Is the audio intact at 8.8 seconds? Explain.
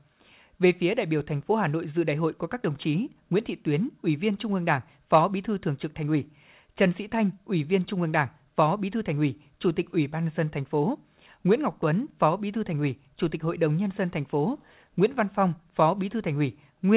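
Yes, the speech at 8.8 seconds is intact, carried through the WebRTC call path with nothing audible above about 4 kHz, which is consistent with a narrowband codec such as G.711 A-law.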